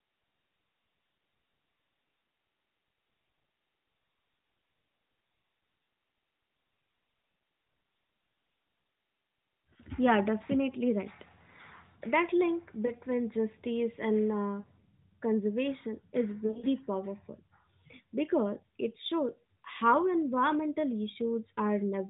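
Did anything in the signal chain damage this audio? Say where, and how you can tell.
Yes. At the network stage, lost AMR speech frames cause brief dips and warbles at 12.86, 14.60 and 16.46 to 16.66 s, where the decoder stretches the last good frame with falling gain.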